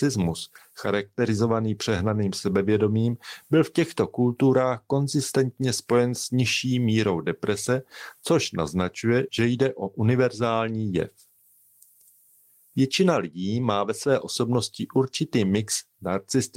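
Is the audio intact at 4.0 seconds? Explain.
Yes, at 4.0 seconds the speech plays through cleanly, with no dropout, click, distortion or other fault audible at that moment.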